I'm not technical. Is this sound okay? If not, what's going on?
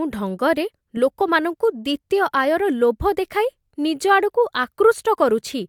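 Yes, nothing stood out as wrong when I listened to this recording.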